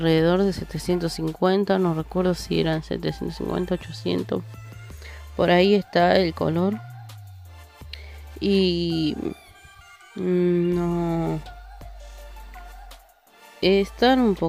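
No technical faults are audible.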